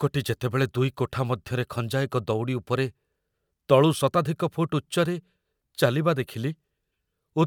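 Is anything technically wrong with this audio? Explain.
No, nothing technically wrong turns up on listening to this speech recording.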